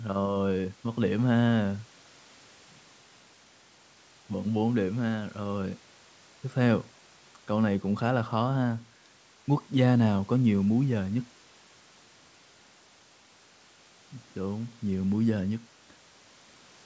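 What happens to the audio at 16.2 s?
Nothing goes wrong at 16.2 s: the speech there is intact, carried cleanly through the call's microphone processing.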